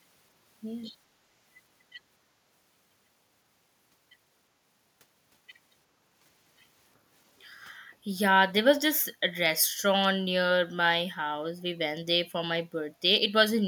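At 7.9 s the room background dips for roughly 150 ms, then returns by 8.03 s. At 13.61 s it drops again, to the end of the clip. Both are background gated by the echo canceller. The canceller heard loudspeaker output and turned the microphone down hard. The first dip is shallow, about 9 dB. The second is deeper, about 18 dB. Each sounds like the ambience briefly dipping.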